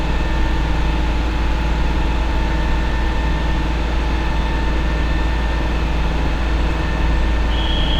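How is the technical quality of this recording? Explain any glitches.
No glitches can be heard anywhere in the recording. The sounds come through with no interruptions.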